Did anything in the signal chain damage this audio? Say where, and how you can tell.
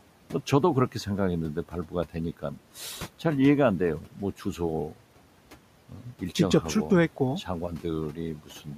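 Yes. At the sample-format conversion stage, the audio was likely reduced to a very short word length by truncation without dither. That fits an 8-bit path. Grainy distortion follows the speech throughout, sitting only about 35 dB below it. Quiet syllables and decays turn gritty and sputter rather than fading smoothly.

In call processing, noise suppressor artifacts run through the whole clip. The suppressor pulls bands it judges to be steady noise down by about 12 dB frame by frame. The room noise, about 20 dB under the speech, sinks in the gaps and swells back under the speech.

The same suppressor also cut speech, mistaking it for noise, from 5.89 to 6.22 s and from 8.36 s to the end at 8.77 s. Each time, speech is pushed down by up to about 12 dB for roughly a fifth of a second in total, so those parts sound swallowed and faint.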